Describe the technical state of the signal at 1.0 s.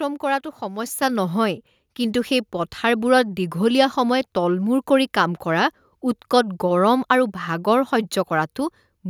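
At 1.02 s the microphone volume is stepped up: the call software judged the input too quiet and raised the device gain in a single jump of about 5 dB. Speech and background noise both get louder at once. The waveform envelope widens abruptly, and the spectrogram brightens evenly across all frequencies from that instant onward.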